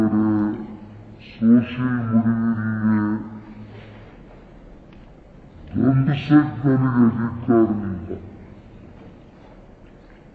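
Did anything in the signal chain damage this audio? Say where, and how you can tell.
Yes, at playback: a wrong sample rate throughout, consistent with 44.1 kHz material clocked out at about 22 kHz with no resampling. Everything runs at half speed and sits a full octave (12 semitones) low, with speed and pitch falling together.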